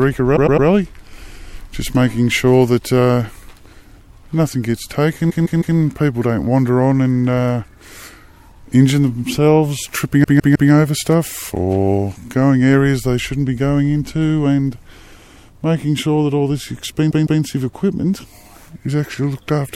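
A short stutter repeats four times: at 0.35 to 0.67 s a 104.5 ms slice plays three extra times, at 5.29 to 5.76 s and 10.23 to 10.70 s a 156.7 ms slice repeats three more times, and at 17.10 to 17.41 s a 156.7 ms slice plays twice more. These are repeated frames: a run of compressed frames, which fits blocks of roughly four and six frames, was delivered again, stretching the audio.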